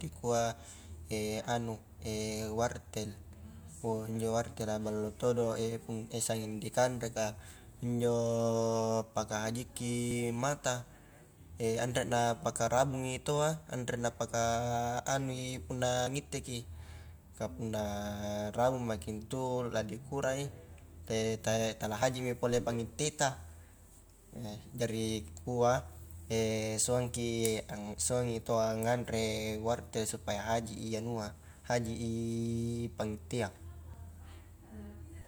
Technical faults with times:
27.98 audio missing between chunks
33.94 audio missing between chunks

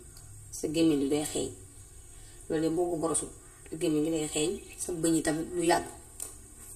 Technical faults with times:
0.00-6.76 channel delay (comb filtering)

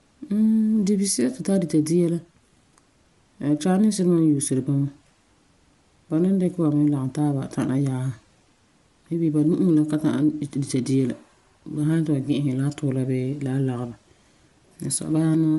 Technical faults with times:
0.00-15.58 Bluetooth LC3 compression

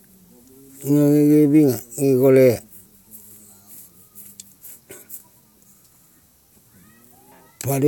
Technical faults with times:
7.32 damaged data in a compressed stream

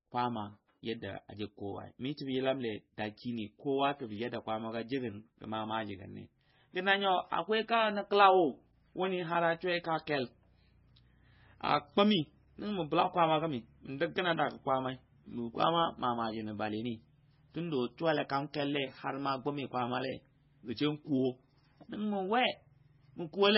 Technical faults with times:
0.00-23.58 MP3 compression

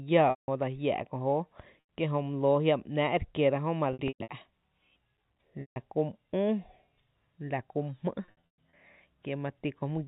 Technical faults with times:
0.30-0.48 packet loss with pitch repetition
1.80-1.87 packet loss with pitch repetition
3.93-4.29 packet loss with pitch repetition
5.61-5.76 packet loss with pitch repetition
8.25-8.73 packet loss with pitch repetition

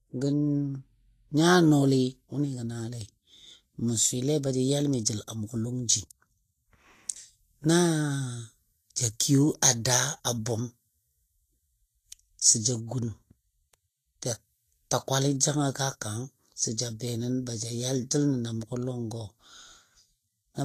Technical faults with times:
0.00-20.64 Vorbis compression

